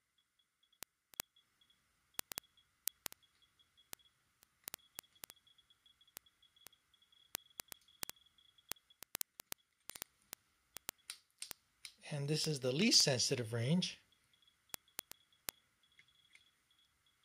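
Word clock ticks run from 0.14 to 17.23 s, roughly every 70 ms. The receiver's free-running clock, about 300 ppm off, drops or repeats single samples.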